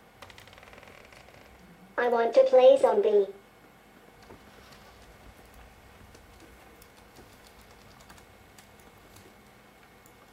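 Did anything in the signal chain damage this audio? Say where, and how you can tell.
Yes. The compressed stream itself was corrupted, a fault at the codec or storage stage: damaged data in a compressed stream at 9.92 s, near the end. Some bytes in the encoded file were lost or overwritten, so the decoder misread the frames there, lost sync and had to hunt for the next valid frame header before resuming. You hear it as a brief chirp or blip.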